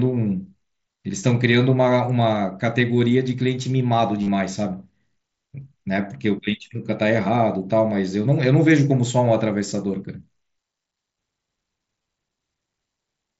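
A brief buzzy, held tone with a slight warble at 4.22–4.28 s and 12.03–12.05 s: concealed Bluetooth headset packet loss, the phone filling lost packets with repeated recent waveform.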